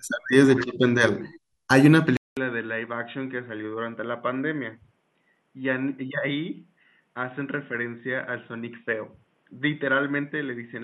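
A speech recording where, at 2.17 s, the sound drops out for about 200 ms and comes back dull, noticeably quieter, with a faint new background underneath and nothing above 3.8 kHz. That's likely the input switched to a poorer device.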